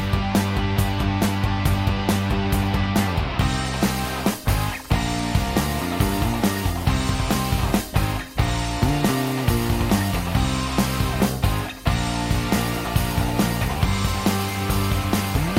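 Nothing here stands out as a technical problem; the audio runs its whole course without any glitch or defect worth pointing to.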